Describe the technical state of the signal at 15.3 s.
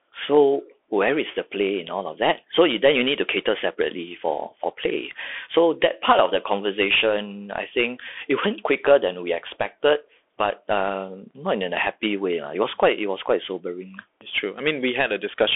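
The Bluetooth CVSD headset codec is in effect at 15.3 s, as it is across the whole clip. Each sample is coded as one up-or-down bit with an adapting step, consistent with a 64 kbps link. The speech is held to a telephone band, with nothing above 3.7 kHz, and carries plainly audible granular hiss and scratchy sibilants.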